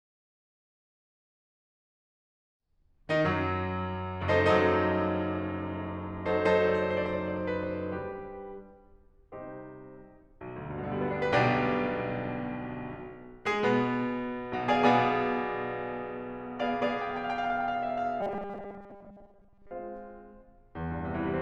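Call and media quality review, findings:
Robotic sound from repeated short buffers, 18.21 to 19.71 s: music turns into a rigid metallic buzz at 200 Hz, loosely following the original. Likely playout underrun. A block of about 5 ms repeats to fill gaps, so most real audio is skipped.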